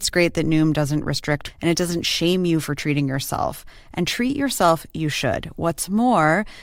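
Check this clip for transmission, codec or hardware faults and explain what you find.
Two faults turn up in this speech clip: a jump where part of the programme is missing, and a single low thump from a shift in the waveform's zero line.

Between 1.47 and 1.51 s the speech lurches forward with a small blip just before "and it doesn't shame". This is likely a stream segment skipped: one segment of the segmented stream failed to arrive and the player carried on with the next, so a stretch of content is simply gone. Unlike a dropout, there is no silent gap and the audio resumes later in the sentence rather than where it left off.

At 3.14 s, just after "shame you for treating", a DC step occurs. The waveform's zero line suddenly shifts, and a high-pass around 5 Hz then pulls the offset back toward zero. That abrupt shift is heard as one low thump while the speech itself continues unbroken. 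Unlike a digital click or a lost packet, nothing is removed or distorted. Only the baseline moves, so the energy sits at very low frequency.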